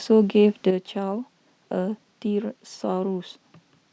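At 0.71 s the speech drops abruptly in level by about 6 dB and stays down until the end. There is no fade. The step is sudden. The likely cause is one channel dropping out of a stereo feed that is then summed to mono. Sound shared by both channels loses half its contribution. Anything carried only in the missing channel vanishes entirely. The result sounds quieter from that point.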